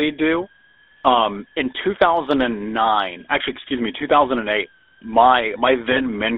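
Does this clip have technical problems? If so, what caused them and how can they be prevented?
Yes, there are three problems.

A switching supply whistle runs through the whole speech clip: a thin high tone, wandering between about 1.53 and 1.78 kHz and sitting roughly 40 dB below the speech. A nearby power converter is cycling at an audible rate, and its pitch shifts as its load changes. That drift separates it from a mains hum or a fixed-frequency test tone. Fitting a supply with a higher, fixed switching frequency, or filtering and moving it, prevents this.

The GSM full-rate codec shapes the entire clip. The band is confined to roughly 300 Hz to 3.6 kHz, and the speech has the buzzy, gravelly texture of a coder that models the vocal tract and drives it with a sparse pulse train, which fits a 13 kbps full-rate link. That grainy roughness, rather than the watery swirl of a modern low-bitrate codec, marks it. 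Using a wideband or newer codec end to end avoids it.

Lost GSM frames occur from 5.92 to 6.00 s, a 40 ms stretch, which fits two lost 20 ms frames. The decoder held the last good frame's settings and repeated them, so the sound freezes into a short metallic ring instead of a clean dropout or a click. That sustained ring distinguishes concealment from a plain gap. A stronger radio link or better error protection prevents it.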